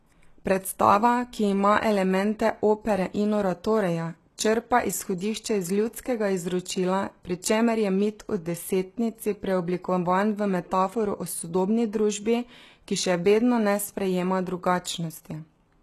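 Speech with plainly audible HE-AAC compression throughout: treble is cut above 12.3 kHz, and the rebuilt upper band sounds gritty, likely from a low bitrate near 16 kbps.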